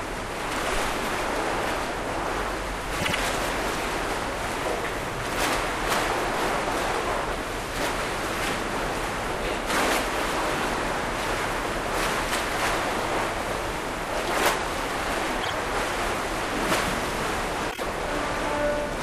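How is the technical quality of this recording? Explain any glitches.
The recording has three stutters from repeated frames, at 2.99–3.15 s, 15.40–15.53 s and 17.70–17.83 s. Short compressed blocks of about 78, 52 and 26 ms were replayed, producing audible re-triggers and slightly lengthening the audio.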